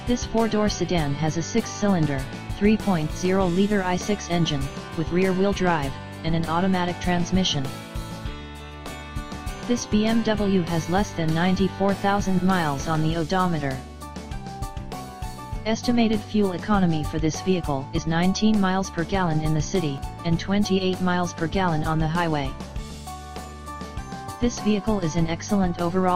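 Two small forward jumps in the sound occur at 17.98 s and 19.98 s, each losing about 20 ms of audio with no gap. This is likely a dropped buffer (overrun), where unread samples were overwritten and the surrounding audio joined directly.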